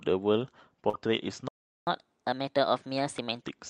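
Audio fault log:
0.89–0.95 s: short concealed packet loss. A brief smeared, wobbly stretch of about 40 ms where the speech seems to hang on its last sound before blending back. That audio arrived too late for the decoder, which covered the hole by extending the preceding sound's pitch and texture.
0.93–0.95 s: lost packet rebuilt from error correction. The tail of that stretch turns rougher and noisier for about 20 ms, with no gap. One lost packet was replaced by the low-bitrate Opus copy carried in the next packet, so those frames play at coarser quality.
1.48–1.87 s: playback stall. The speech cuts out mid-flow into silence for about 0.39 s, then resumes. The player stopped delivering output, likely because it ran out of buffered data or its thread was briefly blocked.
1.87–3.42 s: catch-up at higher speed. After the silence the speech runs noticeably fast and high, at 1.25 times normal speed with pitch raised by roughly four semitones, then settles back. 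The player was resampling its backlog faster to recover the time lost in the stall.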